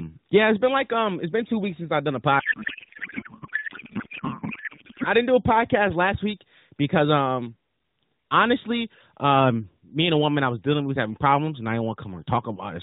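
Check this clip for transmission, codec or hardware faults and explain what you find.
One fault stands out, a break in the middle of an AMR narrowband mobile call at 12.2 kbps.

Codec payload misread, 2.40 to 5.07 s, from just after "since I've done a" until "didn't do a podcast". The decoder took the AMR frames as packed in a different layout from the one the sender used, which fits octet-aligned AMR being read as bandwidth-efficient. Every field landed in the wrong bit positions, so the decoded speech is replaced by garbled noise and warble that barely tracks it. Normal speech returns once the packing matches again.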